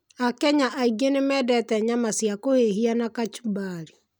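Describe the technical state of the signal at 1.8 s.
At 1.8 s the speech signal is intact, with no audible fault at that moment.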